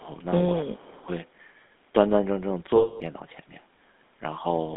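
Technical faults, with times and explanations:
Throughout, GSM full-rate codec: the speech has that gravelly, buzzy grain of the old 13 kbps-style GSM coder, which rebuilds the voice from a vocal-tract model and a thinned pulse excitation. The line is held to roughly 200 Hz to 3.6 kHz, so everything sounds boxed in.
0.00–0.05 and 0.62–1.08, speech suppressed in double talk: the level drops briefly at the very start, by about 15 dB, then for about half a second later on, by about 25 dB. The likely cause is an echo canceller ducking the talker while the far end spoke over them.
2.76–3.02, lost GSM frames: for about 240 ms the sound freezes into a rough, metallic, ringing smear as the decoder keeps repeating the last good frame. That fits around a dozen 20 ms frames dropped in a row.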